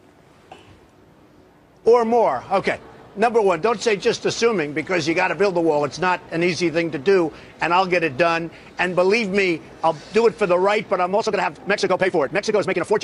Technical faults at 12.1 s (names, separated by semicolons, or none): time-stretched section